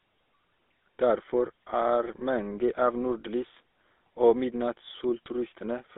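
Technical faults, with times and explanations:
Throughout, GSM full-rate codec: the speech was squeezed through the original GSM coder, which models the vocal tract and drives it with sparse, evenly spaced excitation pulses, a coarse scheme consistent with a 13 kbps stream. That thin excitation gives the voice a plainly audible buzzy, gravelly roughness, and the narrow line band of about 300 Hz to 3.6 kHz removes low body and upper brightness, leaving a boxy, telephone-like tone.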